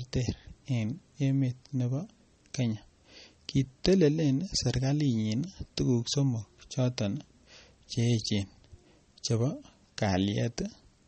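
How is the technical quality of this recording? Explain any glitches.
The recording is clearly degraded by lossy compression. Throughout the clip, nothing is heard above about 8.4 kHz, so the speech sounds dull and muffled. This points to MP3 compression as the likely cause, at a low bitrate that fits about 32 kbps. Starved of bits, the encoder cuts the treble at a fixed frequency and drops weak frequency components. Those components flicker between frames. The result is plainly audible watery, swirling artefacts, with smeared consonant attacks and metallic chirps on s sounds.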